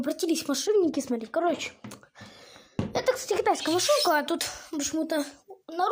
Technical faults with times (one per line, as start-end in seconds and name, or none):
0.66-3.67 de-emphasis applied wrongly